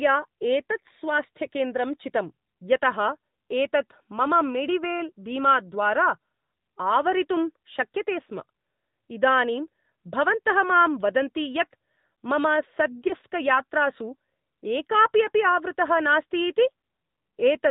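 It's a speech clip squeezed through the AMR narrowband mobile codec, around 10.2 kbps, so it has no highs above 4 kHz and a plainly buzzy, synthetic edge. At 13.08 to 13.13 s there's lost AMR speech frames: a brief dip or warble, which fits a single 20 ms frame the decoder papered over.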